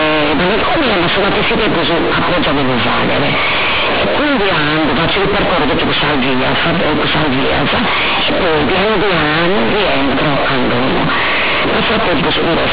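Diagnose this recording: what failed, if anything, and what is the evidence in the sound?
The sample-format conversion stage failed: A-law G.711 bytes are being read as linear 8-bit samples, so the companded audio read as linear never gets expanded. Each byte's sign bit now throws the output across roughly half its range. Quiet and loud passages come out equally large, and the waveform is badly distorted. From start to finish the speech is harsh, very loud and buzzy, with heavy noise in the pauses, all within the telephone band that tops out near 4 kHz.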